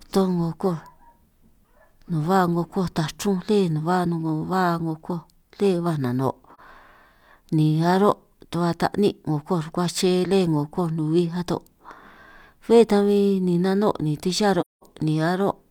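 AAC frame loss with muting hits this speech clip at 6.54 to 6.60 s and 14.60 to 14.83 s. The decoder zeroes the missing spectrum, so overlapping windows fade the sound to silence and back. The gaps last about 43 ms and 213 ms, which fits one and five lost frames.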